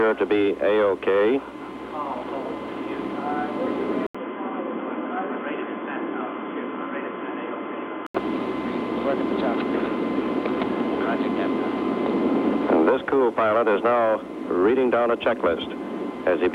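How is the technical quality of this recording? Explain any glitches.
The recording has one fault. From 4.07 to 8.15 s there is an input switched to a poorer device, most likely a change to another microphone or a headset's call profile. An 80 ms gap of silence opens the change. The sound then turns dull and boxy, drops about 5 dB, and carries new background noise about 35 dB below the signal. On a spectrogram, everything above 3.4 kHz vanishes across that span. The waveform shows a brief flat gap, then a smaller envelope until the fuller sound returns.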